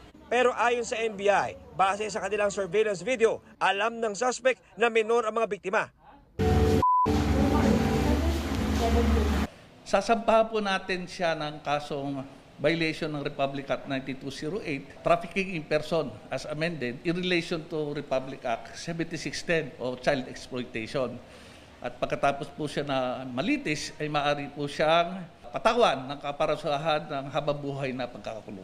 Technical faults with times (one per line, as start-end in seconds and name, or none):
none